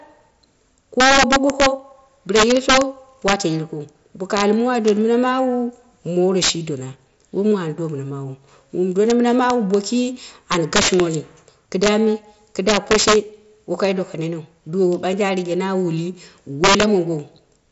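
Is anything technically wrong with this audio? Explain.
Yes, there's integer overflow running through the whole speech clip. The signal is pushed about 11 dB past full scale, and instead of being clamped, peaks wrap around to the opposite sign. Only a small fraction of samples, under one percent, cross over, so you get sharp, violent cracks on the loudest moments, much harsher than ordinary clipping. The band-limiting to about 7.7 kHz and the faint graininess fit an mSBC Bluetooth headset link.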